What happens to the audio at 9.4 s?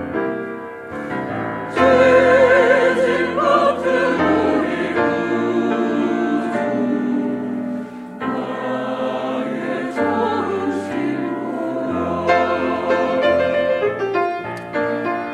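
Nothing goes wrong at 9.4 s; the audio plays through that moment without any dropout, click, glitch or other audible fault.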